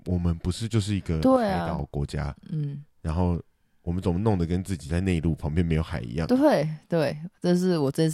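A likely loss of one stereo channel, the fault known as one channel drops out, shows up twice in this speech. From 1.36 to 1.79 s, and again briefly from 6.86 to 6.92 s, only one side reaches the mono sum. The sound falls abruptly by about 6 dB, then jumps back up when the channel returns. This produces a sudden dip in loudness with hard edges at both ends.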